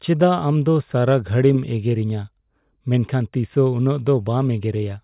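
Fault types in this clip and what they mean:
No technical fault can be heard in this speech recording; the signal holds steady and continuous without any audible disturbance.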